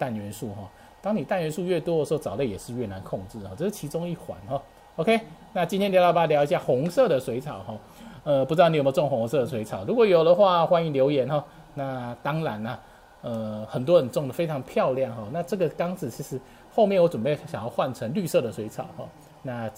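Nothing here needs flagging; the whole recording rolls along without a single glitch, dropout or odd noise to point at.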